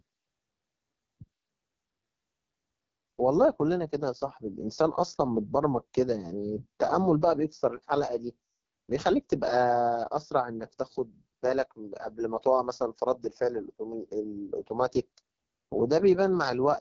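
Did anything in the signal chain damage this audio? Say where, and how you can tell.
Yes, the codec stage did it: an AMR wideband (HD Voice) codec running hard, throughout. Speech sounds rough and raspy, and nothing sits above 7.3 kHz. That damage fits AMR-WB's lowest 6.6 kbit/s mode, where the vocal-tract model gets too few bits.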